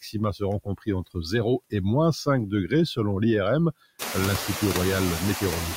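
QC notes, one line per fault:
Throughout: noise suppressor artifacts. The suppressor pulls bands it judges to be steady noise down by about 16 dB, frame by frame, so the background dips between phrases and swells back under speech. The room noise climbs around 4 s.
0.64 to 0.88 s: speech cut by the noise suppressor. The suppressor mistook part of the speech for background and turned it down with the noise, by about 16 dB at the deepest point. Roughly a tenth of a second in total sounds swallowed and faint.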